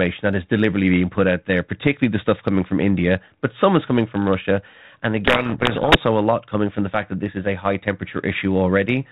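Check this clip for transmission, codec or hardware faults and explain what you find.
There's one real fault here, a codec payload misread. From 5.26 to 6.03 s the speech is swamped by harsh, grinding distortion. The decoder reads the G.726 code words with their bits in the wrong order, so every sample gets a scrambled correction until the packing lines up again. Around it, the light telephone-band coding fits ordinary 32 kbit/s G.726.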